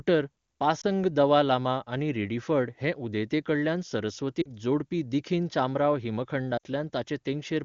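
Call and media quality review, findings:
Lost AMR speech frames, 0.81 s: brief dip/warble, about 20 ms, fits a single frame failing its checksum; decoder reused last pitch and vocal tract settings at reduced gain.

Lost AMR speech frames, 4.42–4.49 s: 40 ms smear-and-fade just before "जोडपी दखिनी चामराव", fits two consecutive frames; wideband concealment decays fast.

Lost AMR speech frames, 6.58–6.66 s: 60 ms drop to near silence, fits three frames. AMR wideband (HD Voice) codec sounds clean, consistent with its top rate.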